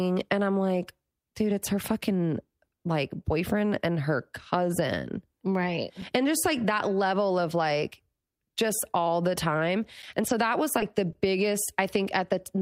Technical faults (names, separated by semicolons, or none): gap between chunks; short concealed packet loss